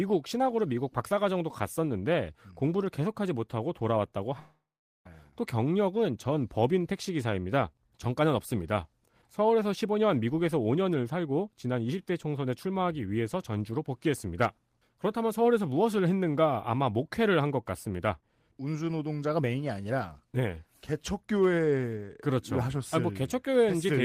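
A long network dropout interrupts this speech recording from 4.39 to 5.07 s. About 0.66 s of audio is lost: the last sound smears into a fading buzz, then about 0.42 s of near-silence follows before speech resumes, likely because packets never arrived.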